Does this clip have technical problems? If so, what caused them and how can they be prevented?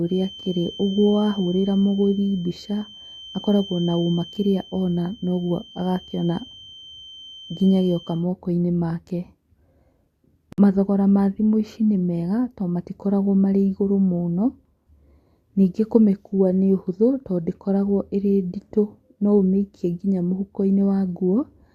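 Yes. A feedback whistle sits behind the speech from 0.0 to 8.27 s, a 3.1 kHz tone about 20 dB below the signal. It is likely a loudspeaker-to-microphone loop held just at the feedback point. It can be prevented by reducing monitor gain, repositioning the microphone, or notching 3.1 kHz.

A gap at a join of encoded pieces opens from 10.53 to 10.58 s, a 55 ms gap just before "mathogora ma thimũ ici". Separately encoded segments kept their encoder start delay and end padding when joined. Trimming the priming delay and padding before concatenation, or encoding the whole recording at once, prevents it.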